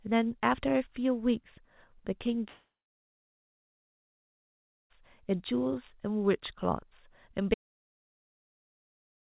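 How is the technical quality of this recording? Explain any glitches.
Two clear glitches, both gaps, over a narrowband call sound with nothing above 4 kHz, which fits a G.711 mu-law link.

From 2.48 to 4.92 s there's a long network dropout, most likely. Packets stopped arriving, so the receiver stretched the last sound into a short fading buzz, then about 2.2 s of near-silence. When audio resumes, roughly 2.4 s of speech is simply gone.

At 7.54 s the sound cuts off mid-flow and stays out until the end. This looks like an audio dropout to silence, likely from a lost input or link, with the system writing silence. It's dead digital silence, with no room tone at all.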